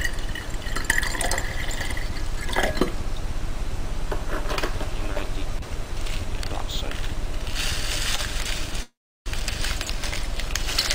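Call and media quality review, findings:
Short stall from a late packet, 8.15–8.21 s: sound briefly held, slight buzz, nothing lost. Jitter buffer ran dry; receiver stretched last sound about 26 ms, adding that much delay. Spectrogram: frozen, smeared harmonics. Waveform: repeating cycle, small dip.

Call audio freeze, 8.82–9.29 s: sound stops, fading buzz, then silence around 340 ms, resumes where it stopped. Likely cause: packets held in transit, jitter buffer emptied; 434 ms filled, delay grows by 434 ms. Spectrogram: decaying smear, blank band. Waveform: flatline.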